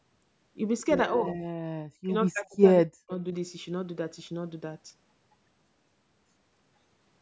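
Speech whose level collapses three times. From 1.18 to 1.4 s it dips by about 15 dB. From 1.78 to 2.13 s and 2.29 to 3.12 s it falls by about 40 dB. This is likely speech suppressed in double talk. The echo canceller turned down the talker while the other side was speaking.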